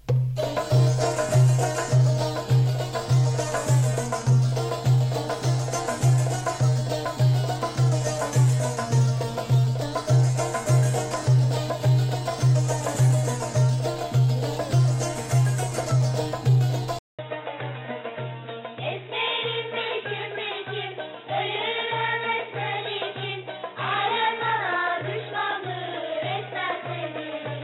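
At 16.99 s the sound cuts out for about 200 ms. When it returns, it has changed character and stays that way to the end. Nothing above 3.8 kHz remains, so the top end is gone and the sound turns dull and boxy. The level falls by roughly 10 dB. A faint new background noise sits far below the signal. The likely cause is an input switched to a poorer device partway through recording.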